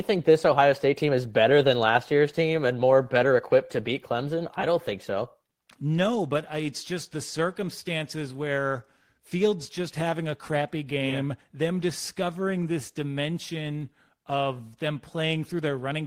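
No technical faults can be heard anywhere in this speech recording. Nothing in the sound points to a problem in how it was captured, processed or delivered.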